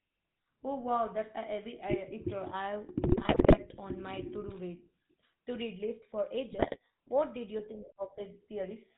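A buzzy, gravelly roughness runs through the whole speech recording, with no content above 4 kHz, so the voice sounds narrow and coarse. That is the GSM full-rate codec. It rebuilds the voice from a vocal-tract model excited by regularly spaced pulses, keeping only every third excitation sample, and the damage here is plainly audible, which fits the 13 kbps full-rate coder. Twice the voice breaks into squawks, pops and gargling, from 3.12 to 3.59 s and again from 6.52 to 6.77 s. These are GSM bit errors. Flipped bits reached the decoder and corrupted the filter, pitch and gain values for a run of frames, bending the spectrum and throwing the level around. The density of the damage points to an error rate of a few percent over each stretch.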